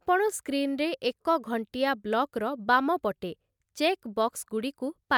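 Listening to the speech recording, nothing stood out as a technical fault at any point.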